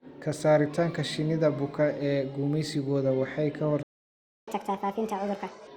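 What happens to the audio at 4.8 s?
From 4.48 to 5.67 s, just after "ee gumeysigooda waxay ka", a catch-up at higher speed resamples the backlog to 1.5x, so speed and pitch rise together, about seven semitones, unlike a tempo-only speedup.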